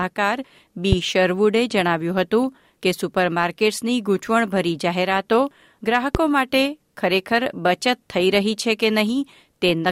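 Loud pops at 0.92–0.95 s and 6.15–6.18 s, each a single sharp thump about 15 dB above the continuing sound, likely a voltage spike from a plug, switch, static or a driver glitch.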